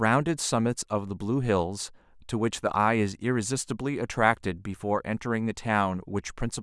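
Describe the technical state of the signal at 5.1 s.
At 5.1 s the speech signal is intact, with no dropout, clipping, distortion or other fault present at that moment.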